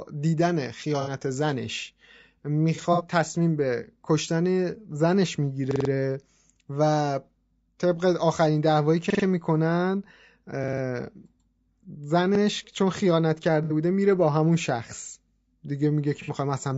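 Throughout the speech there is a rough, grainy texture, with noise between the harmonics and a thin, synthetic top band. The likely cause is low-delay AAC compression (AAC-ELD), whose short frames resolve pitch poorly; the damage fits a low bitrate around 32 kbps.

At 1.01 to 1.09 s a brief smeared, noisy patch of about 60 ms marks AAC frame loss with concealment: the decoder rebuilt missing frames from the last good spectrum. From 2.75 to 3.03 s the same happens in scattered bursts totalling 120 ms, the longest run roughly 70 ms.

At 5.71 to 5.90 s a short piece stutters, with hard joins at each repeat. This is a repeated buffer: audio arrived late, so the device replayed one 46 ms block, which fits a 2048-sample buffer, four extra times. It recurs at 9.10 to 9.24 s (three repeats), 10.64 to 10.82 s (four) and 12.35 to 12.40 s (one). Further concealed frame losses of about 60 ms each follow at 13.64 to 13.73 s and 16.22 to 16.31 s.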